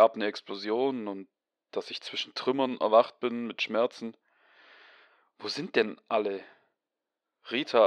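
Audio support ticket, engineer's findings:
Nothing stood out on listening through this speech clip.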